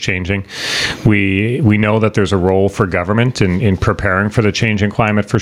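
The audio shows gain pumping throughout, with a level swing of around 20 dB, leaving loud and quiet passages squashed together. The likely cause is excessive input gain driving a fast limiter.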